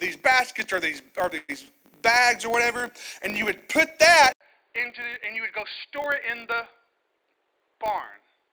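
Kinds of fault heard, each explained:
Filter restarted on every block: A filter here wipes its memory at each block boundary, so every block kicks off with a tiny transient. That gives a 50 Hz buzz running under the whole clip, about 20 ms blocks, getting louder and softer along with the speech.
Call audio freeze: From 1.37 to 1.50 s the speech stalls, most likely because packets were held up and the jitter buffer ran dry. About 111 ms gets filled with a fading continuation, including roughly 10 ms of silence, then speech resumes with nothing lost, just running 111 ms later.
Input switched to a poorer device: At 4.33 s there's an 80 ms drop-out, then the speech turns duller through to the end. It's about 10 dB quieter with its own faint noise floor, which points to a likely switch to a narrower-band microphone or headset.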